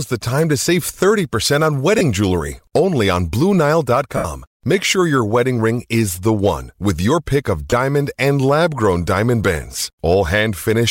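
At 1.98 s, between "save thirty percent on" and "jewelry only on", there's a brief smeary blip of lost LE Audio frames, about 22.5 ms, which fits a few missing frames. The LC3 decoder refills the gaps by reusing the last spectrum with random signs, so the sound goes noisy and blurred. A longer one runs from 4.17 to 4.25 s, about 75 ms, and you can hear it fading out. Another short one at 7.70 s falls between "with your pick of" and "and lab grown diamond".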